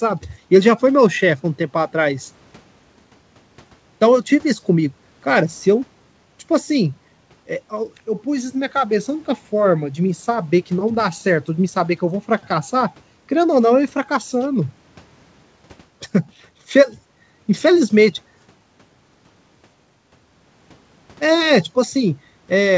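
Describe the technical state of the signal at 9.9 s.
At 9.9 s the speech is intact, with no dropout, glitch or distortion, only the steady band limit of the call codec, which leaves nothing above 8 kHz as G.722 does.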